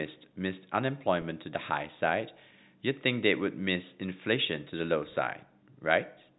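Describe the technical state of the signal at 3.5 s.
At 3.5 s the speech is intact, carried cleanly through the G.711 telephone coding path with its usual narrow band topping out at 4 kHz.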